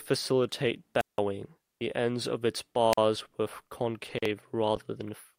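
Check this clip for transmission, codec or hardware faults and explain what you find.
Two wireless microphone squelch dropouts interrupt the speech. The first runs from 0.99 to 1.19 s, with the output muted for about 171 ms. The second, from 2.92 to 2.98 s, mutes for about 43 ms. Each time, the radio link from an analogue FM microphone weakens. Hiss or static swells briefly. Then the receiver's squelch shuts the output, leaving a hole of near silence before the voice comes back.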